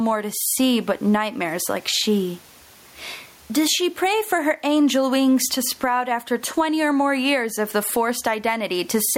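Gain pumping runs through the whole speech clip, swinging the gain by around 15 dB. The likely cause is input gain set far too high, with a fast limiter clamping every peak, so the level sounds squashed. The room noise sits about 41 dB below the speech.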